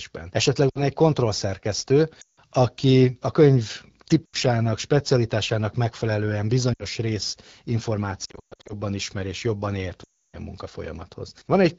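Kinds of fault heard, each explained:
Lost AMR speech frames: Corrupted frames failed their checksum. The decoder repeated the last pitch and vocal tract settings at falling gain. Six dropouts, 60 to 320 ms, dip or warble and fade fast, worst near 8.3 and 10.0 s, over the wideband codec's clear speech.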